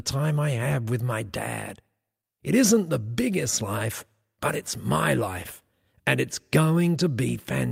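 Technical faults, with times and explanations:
2.21–2.25 s, short stall from a late packet: a packet missed its playout deadline and the jitter buffer ran dry, so the receiver stretched the last sound it had for about 18 ms until the data arrived, then resumed from the same point. Nothing is lost, but the sound holds a moment too long with a slight buzzy or dipped quality, and everything after it plays 18 ms later than before.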